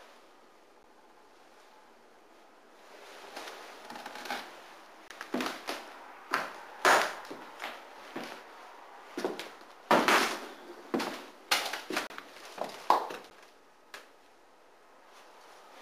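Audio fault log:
0.83 s, block of digital silence: a 10 ms run of zeros replaces the sound. At that length it comes across as a quick tick or dip, not as a gap.
5.08 to 5.10 s, block of digital silence: 20 ms where the audio just stops and comes back with no fade. Either the output buffer wasn't filled in time or a calculation gave invalid values.
12.07 to 12.10 s, block of digital silence: the longest at 30 ms, a short hole you can hear.
13.3 s, block of digital silence: another 10 ms dropout, heard as a tick or dip.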